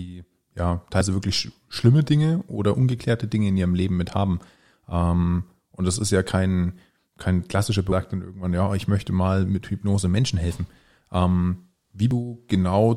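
Damaged data in a compressed stream breaks the decoder's frame sync three times, so it misreads a few milliseconds and has to resync: a tiny blip at 1.01 s before "wirklich sch schlimme", another at 7.92 s after "ja kein kein klassischer", and a third at 12.11 s.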